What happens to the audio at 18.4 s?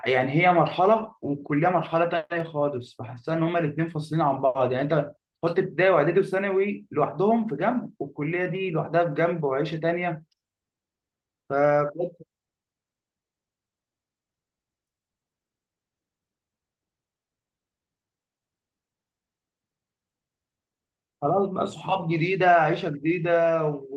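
Nothing goes wrong at 18.4 s: the speech carries on intact through that moment, with no dropout, click, distortion or other audible fault.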